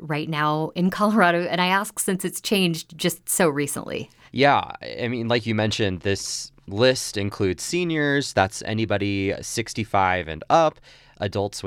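No technical faults are audible.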